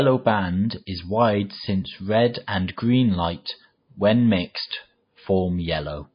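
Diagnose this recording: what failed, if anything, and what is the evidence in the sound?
The speech has been through a codec stage, most likely MP3 compression, and it's there for the whole clip. The top end stops dead at about 5.1 kHz, which is the encoder chopping off the treble when it's starved for bits, and the damage is plainly audible, with weak frequency lines dropping in and out frame to frame. That bandwidth ceiling fits a very low bitrate, somewhere around 24 kbps.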